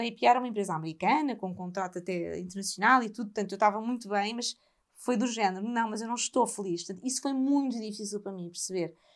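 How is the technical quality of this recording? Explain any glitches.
The technical quality of the recording is sound, with no glitches to explain.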